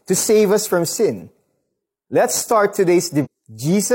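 A speech clip with a stream segment skipped at 3.21 to 3.27 s. The sound jumps forward with a blip, so a stretch of the programme never plays. The likely cause is one segment of a segmented stream failing to load, with the player carrying on from the next one. Unlike a dropout or buffer underrun, there is no silent hole or stall that later resumes where it left off. The audio lands further along and continues from there.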